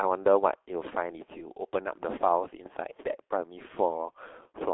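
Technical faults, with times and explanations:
Throughout, G.723.1 codec: muffled, hoarse speech with smeared consonants from slow 30 ms frame updates; the spectrogram shows nothing above 3.8 kHz, consistent with 6.3 kbit/s coding.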